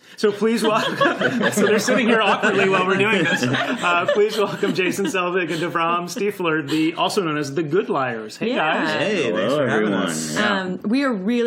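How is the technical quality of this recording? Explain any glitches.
Nothing in the recording stood out as a technical problem on listening, so there are no glitches to explain.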